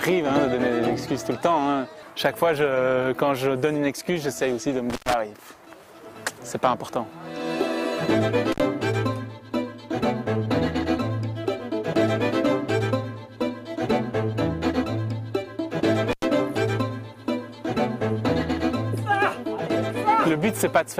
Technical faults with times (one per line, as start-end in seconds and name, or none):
4.90-5.14 intermittent contact
8.52-8.60 intermittent contact
16.11-16.24 intermittent contact